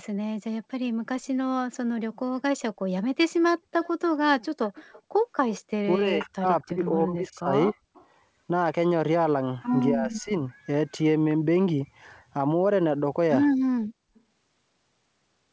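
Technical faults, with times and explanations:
3.82 to 3.89 s, 4.66 to 5.02 s, 7.94 to 8.07 s and 14.15 to 14.21 s, echo leak: A faint, delayed copy of the speech returns each time. It trails the original by about 233 to 237 ms. It sits roughly 20 to 35 dB below the main speech and fades across the clip. The likely cause is a loudspeaker on the far side whose echo canceller missed part of what its microphone picked up. That remainder was sent back down the line as short scraps.
5.95 to 7.75 s and 9.92 to 10.3 s, speech suppressed in double talk: The speech dips while the other side is talking. In the first stretch it drops by roughly 25 dB, in pieces adding up to about a second. In the second it falls by around 10 dB for roughly 0.3 s. This likely comes from an echo canceller that could not separate the local talker from the loudspeaker echo, so it turned both down together.
7.81 to 7.93 s, background gated by the echo canceller: The room sound drops out for about 0.1 s, falling by about 37 dB before it returns. 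The echo canceller clamped the microphone hard while the loudspeaker was playing, and the background came back when it let go. The gap is short. It sounds like a brief hole in the ambience.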